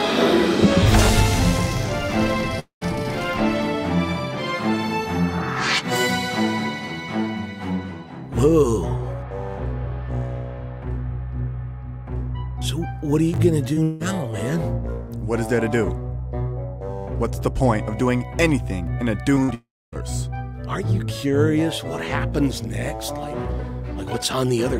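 At 2.59 to 2.83 s there is a gap, likely a long network dropout. About 220 ms never plays. The last sound hangs briefly, fades, then about 110 ms of silence follows.

At 13.34 to 13.38 s, chunks play out of order. A 20 ms piece arrives one chunk late. The jumbled order creates hard joins.

At 13.73 to 13.80 s, short concealed packet loss fills a hole where 40 ms is missing. The continued sound smears briefly before blending back in.

At 13.83 to 14.02 s there is a second likely long network dropout. About 180 ms is lost. A fading continuation covers the whole gap, with no silence.

At 19.35 to 19.40 s, another short concealed packet loss replaces 20 ms. It is heard as a quick smear or wobble.

At 19.43 to 19.50 s, a burst of packet loss removes 60 ms. The held sound dims as a buzz or hiss, then the audio jumps ahead.

At 19.54 to 19.94 s comes the third likely long network dropout. About 380 ms is missing. 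A brief fading tail leads into about 260 ms of silence.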